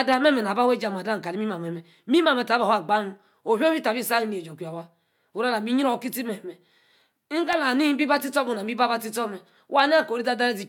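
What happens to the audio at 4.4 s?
Nothing goes wrong at 4.4 s; the speech runs on intact there, with no dropout, click or distortion.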